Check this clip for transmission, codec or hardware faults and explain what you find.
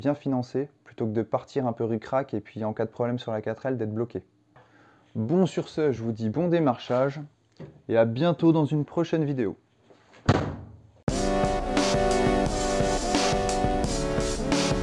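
Nothing stood out on listening; no fault of any kind could be heard anywhere in the clip.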